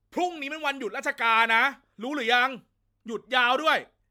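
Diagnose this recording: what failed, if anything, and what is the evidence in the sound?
The fault is in the codec stage, and it runs through the whole speech. The sound is swirly, smeared and hollow, and consonant attacks blur. Nothing is left above 19.9 kHz. The damage is worse than a single MP3 pass would cause at a bandwidth that fits roughly 130 kbit/s. This is likely generation loss from about seven MP3 encodes. Each pass quantised on a shifted frame grid, so noise and spectral holes piled up.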